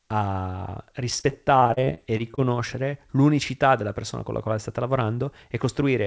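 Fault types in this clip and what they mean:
Repeated packet loss (robotic sound): from 1.20 to 2.39 s the speech turns choppy and robotic, broken by 12 short holes, the longest 34 ms, together covering about 23% of that stretch. Packets kept going missing or arriving late, and each hole was patched by stretching the sound just before it, about 274 ms of filled-in audio in all, before the next loss hit. It plays through a call path with nothing above 8 kHz.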